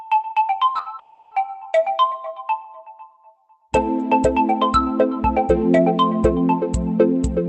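At 0.73, 0.77 and 0.83 s comes short concealed packet loss. Brief gaps of audio were filled by extending the preceding sound. Each sounds like a quick smear or wobble.

From 0.99 to 1.33 s, a long network dropout is the likely cause. The sound stretches into a fading buzz or hiss for about a third of a second, then resumes with that stretch missing.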